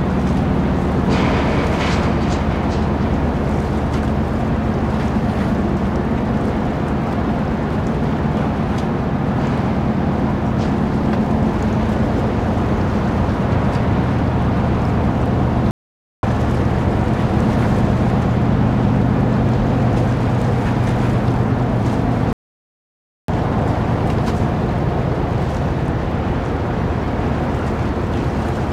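At 15.71 s the sound cuts out for 0.52 s, and at 22.33 s for 0.95 s, each a playback stall: output goes silent mid-flow until the player recovers, likely because its buffer ran dry or its thread was blocked.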